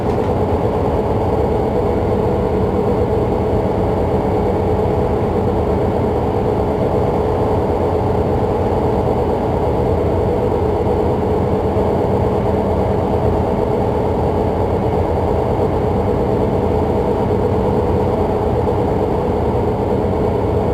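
From start to finish the audio carries crude rate conversion: it was moved from 44.1 kHz to 48 kHz by nearest-sample picking, so some samples are simply repeated in a cycle set by the two rates. That uneven timing produces an error around 35 dB below the signal, heard as a gritty, inharmonic fizz riding on loud and bright moments. A spectrogram shows faint mirrored, shifted copies of strong components; zoomed waveforms show small stair-steps.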